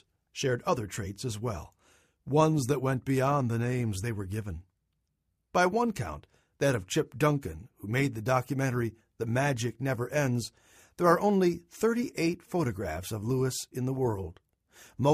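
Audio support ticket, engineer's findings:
Nothing stood out on listening.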